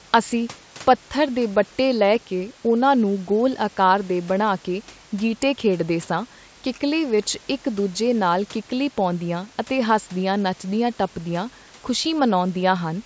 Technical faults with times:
none

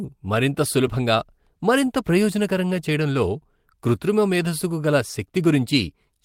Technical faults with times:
none

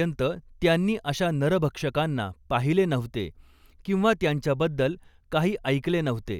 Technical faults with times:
none

